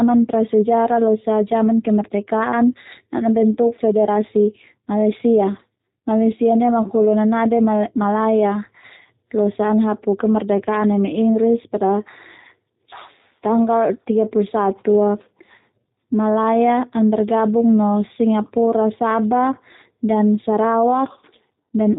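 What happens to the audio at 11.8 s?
At 11.8 s the speech is still passing through a G.729 codec that runs the whole clip, with a sound that fits its 8 kbit/s rate. It rebuilds each 10 ms frame from a vocal tract filter and a few pulses, so nothing above 4 kHz survives and the speech sounds plainly rough, dull and synthetic.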